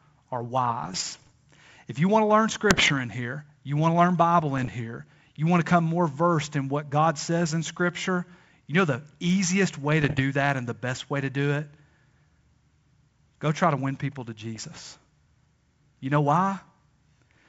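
Bit errors on an ADPCM link hit this speech at 0.84–1.32, 2.70–2.92, 4.58–4.69 (before "here you want to"), 10.02–10.22 and 14.56–14.65 s. Flipped bits upset the decoder's step size and predictor. Each burst sounds like rough pops with brief level jumps.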